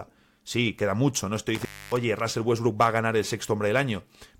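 Intermittent contact at 1.55 to 1.97 s, right after "queda mucho no estoy": a loose plug or cable connection briefly opens, so the speech drops out for about 0.27 s, bracketed by crackle as the contact breaks and remakes, with faint hiss during the gap.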